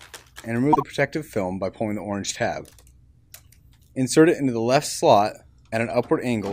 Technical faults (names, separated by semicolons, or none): corrupt frame decoded